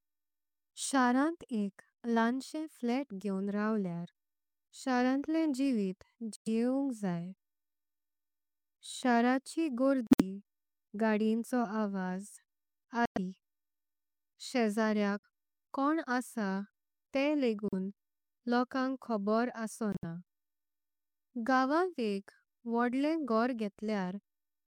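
Speech with corrupt frames muted, leaving abrupt silent holes at 6.36, 10.07, 13.06, 15.22 (before "कोण असा"), 17.68 and 19.92 s. Damaged compressed frames were rejected and replaced with silence.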